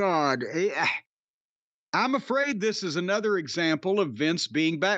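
Short concealed packet loss at 2.41 to 2.45 s, just before "this is another": a brief gap in the speech was filled by extending the preceding sound, leaving a quick smear.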